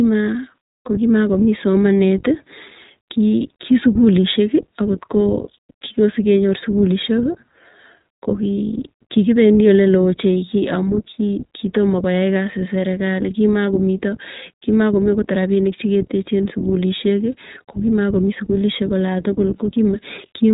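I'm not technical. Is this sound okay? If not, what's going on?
No. Throughout, the iLBC codec, a phone-call speech format, cuts everything above 4 kHz and codes short chunks separately, so speech sounds muffled, rough and slightly robotic.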